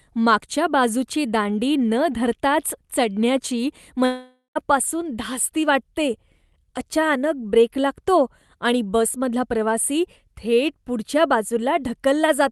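From 4.05 to 4.57 s the speech breaks off. The last sound is stretched into a fading buzz or hiss, followed by about 0.12 s of silence, and speech resumes past the lost half-second, likely a long network dropout. A spectrogram shows smeared, decaying sound, then a blank column.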